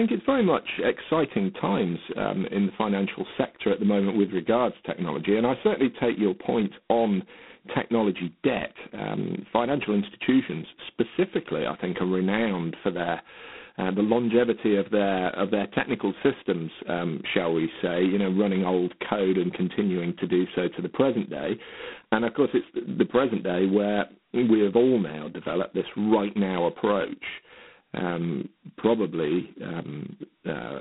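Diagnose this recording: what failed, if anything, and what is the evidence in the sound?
The failure is at the codec stage: G.726 ADPCM throughout the speech. A harsh, rasping hiss rides on the speech and swells with its level. The band runs from 150 Hz to 3.5 kHz, with nothing above 3.9 kHz. Coarse difference coding leaves heavy quantisation noise, which fits the 16 kbit/s mode.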